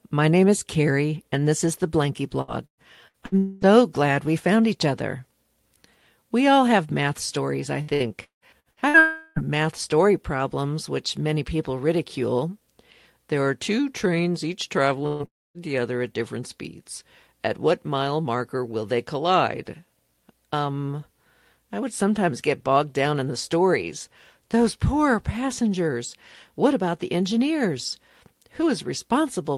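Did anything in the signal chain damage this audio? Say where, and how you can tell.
Yes, the network stage. Repeated packet loss makes choppy, robotic sound from 2.41 to 3.35 s and 7.82 to 8.97 s after "have math stories I": several short concealed gaps, unlike one single hole.

A long network dropout is the likely cause of the longer holes at 3.38 to 3.65 s, 9.00 to 9.39 s, and 15.26 to 15.58 s before "the other at different". The last one fades into silence.

A burst of packet loss at 15.07 to 15.23 s after "are two trains each" leaves about 130 ms filled by continuing the last sound, with about 120 ms of audio missing, shorter than a dropout.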